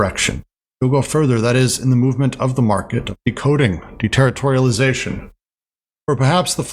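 No technical faults can be heard anywhere in the recording; the signal stays continuous and steady throughout.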